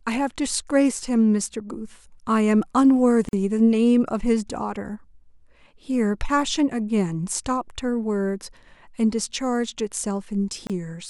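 A speech recording with two gaps at joins of encoded pieces. At 3.29 s the sound drops out for about 44 ms, and at 10.67 s for about 28 ms. In both cases the silence opens abruptly in otherwise continuous speech, with edges softened by the codec, and the speech resumes exactly where it stopped. Separately encoded segments were spliced without removing the encoder's start-up delay and final-frame padding, leaving those silent stretches in the joined file.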